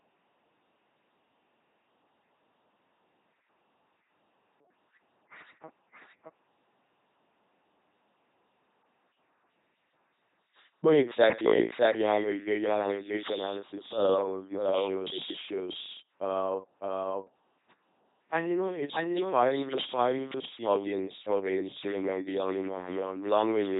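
A second copy of the speech is mixed in throughout, likely from a slower capture path feeding the same signal twice. It trails the original by roughly 0.7 s at about 5 dB lower, with no decay or room colour, so the doubled audio track sounds like a dry, full-band echo.

The whole clip also passes through a low-rate speech vocoder, which fits LPC-10 at 2.4 kbit/s. It rebuilds each moment as either pulse-driven buzz or noise through a simple filter, so the voice becomes heavily robotic and mechanical, with nothing above 3.8 kHz.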